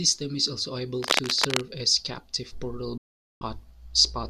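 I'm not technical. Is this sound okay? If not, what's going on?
No, there are two problems in this speech clip.

From 1.00 to 1.62 seconds, a rough scratching, rustling noise sits over the speech. It is about as loud as the speech itself. This is cable scratch noise. The likely cause is a worn cable, plug or knob being moved. When a loose contact shifts, its resistance changes rapidly for a moment. That produces this burst of crackly noise.

From 2.98 to 3.42 seconds, the sound cuts out completely. It fades away almost instantly and stays silent for about 0.43 seconds. Then it comes back. This is a digital broadcast dropout. The receiver lost the digital signal and muted itself. It waited until clean data arrived again. Whatever was said during that gap is gone. It cannot be recovered from this recording.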